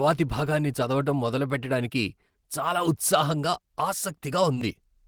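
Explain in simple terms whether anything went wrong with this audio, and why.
Something did go wrong with the timing of this speech.

The first problem is clock drift between sender and receiver. The sending device's audio clock ran slow, by roughly 2 percent. So the receiving side kept getting sound a little too late. It had to keep adjusting to stay in step. You hear this as slight unevenness in the pace of the speech across the whole clip, not one clear glitch.

Those adjustments are the second problem: repeated timing corrections. From about 0.02 s to 3.36 s, the receiver kept repeating tiny bits of sound to fill the gaps. The speech plays at about 98 percent speed in this stretch. In total, roughly 70 milliseconds of extra sound gets added. Each repeat is very small and unevenly spaced. Together they make the rhythm feel a bit wobbly or dragged, with faint hiccups.

The third problem is a short stall from a late packet, at 4.54 to 4.57 s. 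A piece of audio arrived later than it was needed. The receiver had nothing to play, so it stretched the last sound by about 20 milliseconds. Then it carried on from the same spot. Nothing is lost. One sound is just held a moment too long, with a slight buzz or dip.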